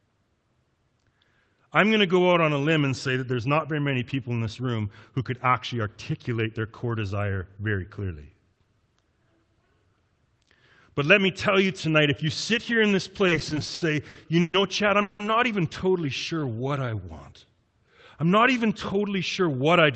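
Repeated stalls (stutter) run from 13.27 to 14.55 s. Late packets emptied the jitter buffer twelve times, and the receiver stretched the last sound to fill 340 ms, with the longest gap at 120 ms. The audio drags and stutters.

A call audio freeze follows at 15.01 to 15.21 s. About 180 ms of continued, fading sound is inserted with no silence, likely because the jitter buffer ran dry while packets were held up.

A jitter buffer slow-down runs from 15.92 to 17.05 s. Repeated pitch periods add 135 ms and play the audio at 89% speed. Sounds come out drawn out at unchanged pitch.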